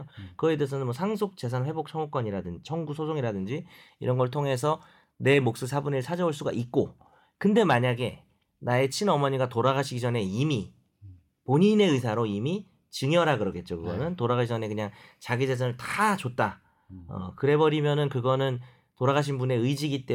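No technical faults can be heard in the speech at any point.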